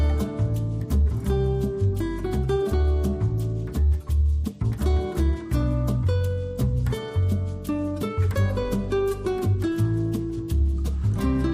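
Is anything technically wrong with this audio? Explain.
No, nothing technically wrong can be heard anywhere in this audio.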